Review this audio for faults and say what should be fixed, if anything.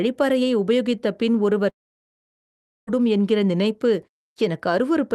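Speech cuts out from about 1.69 s to 2.89 s, most likely because of a long network dropout. Nothing arrived for roughly 1.2 s, so the receiver stretched the last bit of sound into a buzz that fades, leaving near-silence for about 1.1 s. When speech returns at 2.89 s, the lost stretch is simply gone. The Opus call path limits the audio to 12 kHz. To prevent this, look for outages on the network link and enable forward error correction or redundancy so losses can be recovered.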